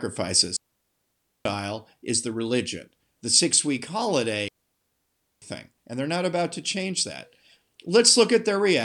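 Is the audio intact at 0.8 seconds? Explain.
No. At 0.8 seconds the speech has fallen into a clean hole of near silence that runs from about 0.57 s to 1.45 s, roughly 0.89 s in all, with no crackle or noise burst on either side. This is a digital wireless dropout: the radio link lost too much data to rebuild the signal, so the receiver muted its output with a very short fade and held it there until reception recovered.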